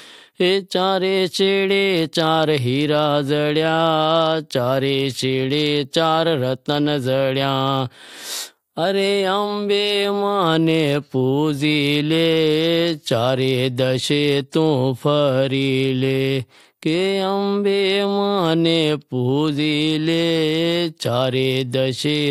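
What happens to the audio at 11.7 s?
Nothing goes wrong at 11.7 s; the audio carries on intact through that moment with no fault to be heard.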